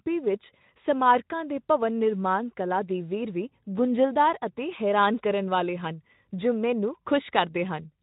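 No technical faults turn up anywhere in this speech recording. The Speex coding is audible only as a light codec texture, which fits a middling quality setting.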